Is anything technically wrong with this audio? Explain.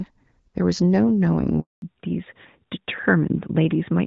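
Yes, there are two faults. At 1.60 s a handover gap begins. The call switches networks, no speech frames arrive, and the speech drops to silence for 220 ms until 1.82 s. From 1.82 s to the end there is a fallback to narrowband. The call leaves HD Voice for an older narrowband codec, so nothing above 4 kHz remains. The speech sounds duller and rougher than the wideband opening, which points to AMR-NB near 12.2 kbit/s.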